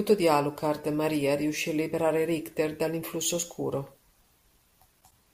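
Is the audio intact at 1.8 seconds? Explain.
Yes, at 1.8 seconds the speech plays through intact, with no dropout, click, distortion or other fault at that moment.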